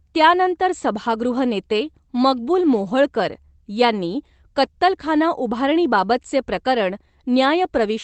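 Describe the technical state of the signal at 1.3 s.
At 1.3 s the speech is intact, with no dropout, glitch or other fault, only the band limit to about 8 kHz that comes from passing through the Opus call path.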